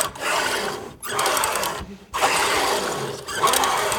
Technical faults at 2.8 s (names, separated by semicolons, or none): none